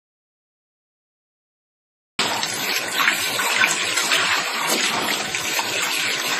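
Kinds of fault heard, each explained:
Audio dropout to silence, 0 to 2.19 s: the clip opens in silence with no room tone, likely from an input lost while recording continued writing silence.
WMA compression, throughout: sounds ring and wash with a hiss that breathes with the signal, nothing above 15.1 kHz, likely a low-bitrate transform codec such as WMA around 24 kbps.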